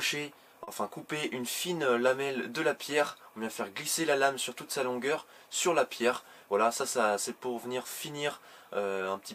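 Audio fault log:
0.63–0.69 s, short stall from a late packet: a packet arrived late and the jitter buffer ran dry, so the receiver held the last sound for about 40 ms until it came, then resumed where it left off. Nothing is lost, but the sound lingers slightly, and playback delay grows by 40 ms.
6.39–7.04 s, jitter buffer speed-up: with extra audio queued, the receiver trimmed small pitch-period slices repeatedly to shrink the backlog, cutting about 40 ms in total. Playback runs at 105% speed with unchanged pitch, so this stretch sounds slightly rushed.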